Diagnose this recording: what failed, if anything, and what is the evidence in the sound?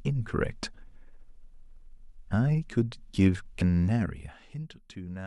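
The failure is in the codec stage: damaged data in a compressed stream. At 3.58 to 3.61 s there's a brief glitch, about 30 ms long, in the speech. Corrupted bytes there made the decoder misread frames, lose sync and hunt for the next valid frame header.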